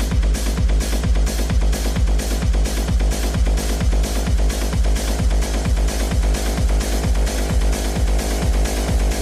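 No technical faults can be heard in the clip, so there is nothing to place in time order.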